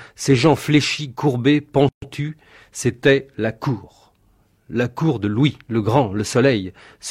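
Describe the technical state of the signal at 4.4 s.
At 4.4 s the speech signal is intact, with no technical fault present at that moment.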